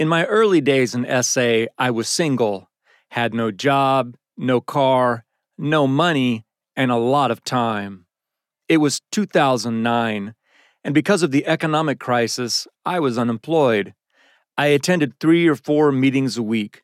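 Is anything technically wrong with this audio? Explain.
No, there's nothing technically wrong here; the speech comes through without any glitch, dropout or distortion to point to.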